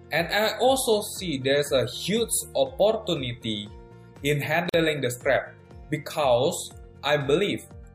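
At 4.69 s a gap at a join of encoded pieces cuts the sound for about 45 ms, until 4.74 s. Two separately encoded pieces were joined with the encoder's start delay and end padding left in, so a brief silence with smeared edges interrupts the sound, which then resumes where it stopped.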